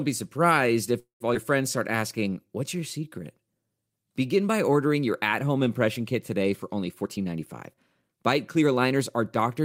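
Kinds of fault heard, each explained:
Call audio freeze: From 0.99 to 1.22 s the sound stops advancing. The last bit of speech is carried on as a fading fill that drops to silence for about 120 ms before the speech resumes where it left off. Some 208 ms of gap is inserted and nothing is lost, which points to packets that were likely held up in transit while the jitter buffer ran dry and the receiver concealed the wait.
Skip ahead: Just after the freeze, at 1.34 to 1.37 s, playback jumps forward. Roughly a tenth of a second of speech is missing, and the two sides are joined with only an 8 ms bridge, so the cut is abrupt rather than a pause. That stretch was dropped in transit or by the jitter buffer, removing about 100 ms of delay, roughly half of what the preceding freeze had added, and pulling the stream back toward its normal latency.
Jitter buffer slow-down: Between 1.92 and 3.11 s the speech runs at 91% of normal rate without any change in pitch. 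Voiced sounds are stretched and pauses lengthened, as single pitch periods were repeated back to back. In total 110 ms of duplicated material was inserted, which is the receiver building up a reserve in its jitter buffer.
Jitter buffer speed-up: From 7.02 to 8.93 s the speech plays at 111% of normal rate, again at unchanged pitch, and sounds noticeably hurried. The receiver was holding more audio than its target delay and trimmed it by cutting out short runs of one or a few pitch periods repeatedly through this stretch. Roughly a fifth of a second was removed in all, shortening the latency back toward its intended level.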